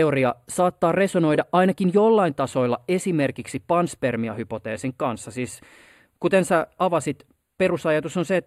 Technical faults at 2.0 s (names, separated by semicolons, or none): channel delay (comb filtering)